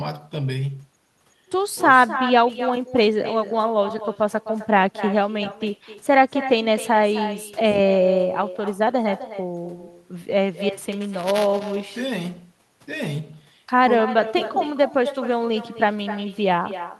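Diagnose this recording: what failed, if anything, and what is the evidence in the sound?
Two things went wrong. The whole way through, there's echo with no canceller, a call-processing failure. Every phrase is shadowed by a thinner copy about 12 dB down, arriving roughly a third of a second later. The far end is playing the call on a loudspeaker, its mic picks that up, and with no echo canceller in the chain the sound comes back to you after the round trip through the network.

The second problem is buffer tearing at the driver or buffer stage, from 10.92 s to 13.51 s. You get a steady robotic buzz at 200 Hz riding on the audio, which fits a 5 ms buffer period. The app writing the ring buffer and the hardware reading it have drifted until they cross inside each period. A small sliver of every buffer replays audio from one lap back, roughly 15 ms old, with hard joins on both sides.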